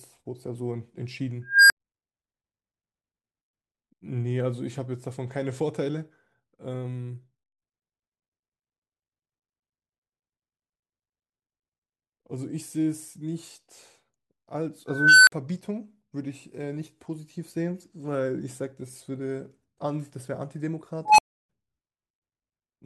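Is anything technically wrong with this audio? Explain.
Yes. An unstable filter fires at 1.46–1.77 s, 14.88–15.32 s and 21.05–21.49 s. Runaway feedback swells a tone of around 1.5 kHz (around 1 kHz last) to clipping, then the signal drops out for 70, 50 and 310 ms.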